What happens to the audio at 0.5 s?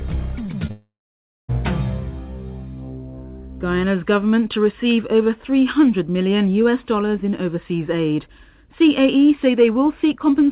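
Two quick smears or wobbles sit at 0.46–0.50 s and 0.52–0.55 s. Both are short concealed packet loss: about 20 ms of audio arrived too late each time, and the receiver bridged the gap by extending the preceding sound before blending back.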